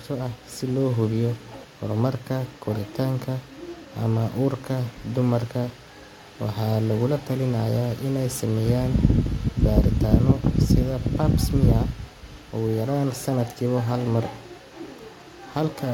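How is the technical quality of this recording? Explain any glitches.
The recording has two audible glitches of the same kind. Compressed frames are skipped at 1.63 s, between "si loo hubiyo" and "horumarka koritaanka", and again at 12.5 s. At each point a run of compressed frames never reaches the output, either because they are missing from the stream or because the decoder rejected them as damaged. The speech jumps forward by around 150 ms, which fits about seven frames of 23.2 ms each. Adjacent frames overlap, so each jump sounds like a short smeared blip rather than a sharp click.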